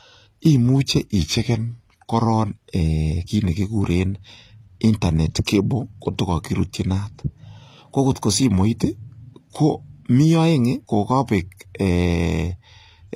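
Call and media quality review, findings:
Treble throughout gritty and metallic, sibilants lispy, upper harmonics misaligned. Likely HE-AAC compression: lower spectrum coded, highs rebuilt by spectral band replication from copied lower bands under a coarse envelope. Damage plainly audible, consistent with a low bitrate near 24 kbps.

1.19–2.04 s: playback slows 6%, pitch drops 108 cents (about a semitone). Likely drift correction step: clock-matching resampler jumped rate in one move to rebalance its buffer.

7.95–8.50 s: opposite step, speed up 6%, pitch up 101 cents. Likely the same drift correction mechanism, this time draining buffer instead of refilling.

5.45 s: short hiss ahead of a sharp attack, onset softened. Pre-echo: transform codec spread block quantisation noise into the quiet stretch before the transient, smear about 12 ms.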